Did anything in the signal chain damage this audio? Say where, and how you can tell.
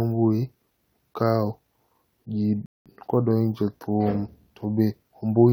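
Yes: a rebuffering stall at playback, 2.66 to 2.86 s, adds about 0.2 s of silence, a flat waveform gap and blank spectrogram band, before the speech resumes exactly where it halted.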